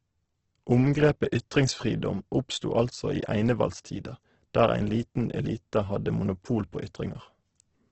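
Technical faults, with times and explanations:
Throughout: Opus compression. Nothing is left above about 8.2 kHz, so the speech sounds band-limited, and the damage is heavy: the sound comes out rough, grainy and noise-filled rather than hollow. The likely cause is Opus in its music mode at a low rate, consistent with around 12 kbps, where starved bands are filled in instead of dropped. That is why there is little of the swirling, warbling gaps that mark MP3.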